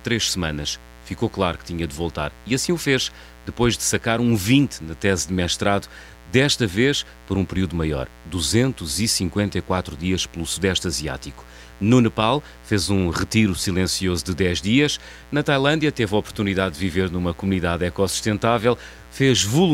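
From start to finish, switching spikes from a dimmer, rectifier or unshielded line leak into the path twice per 60 Hz mains cycle, producing mains buzz: a steady, raspy tone with harmonics climbing to several kHz, sitting roughly 25 dB below the speech.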